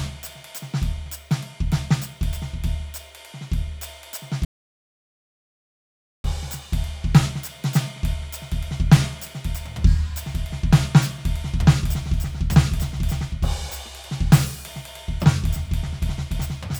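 A piece of music that suffers an audio dropout to silence from 4.45 s to 6.24 s, roughly 1.8 s in which the sound stops dead and then resumes mid-phrase, with no decay or room tone bridging the gap. The likely cause is a lost input, such as a disconnected device or a brief mute, while recording continued and wrote silence. On a waveform the trace collapses to a flat line; a spectrogram shows a blank band across every frequency.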